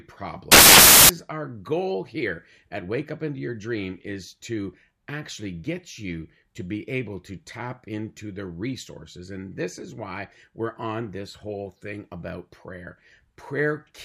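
From 0.52 to 1.09 s the speech vanishes under a burst of loud, harsh broadband noise. These are samples built from the wrong bytes: each value is assembled misaligned or byte-swapped, so the rapidly fluctuating low-order bits land in the high-order positions and swamp the signal.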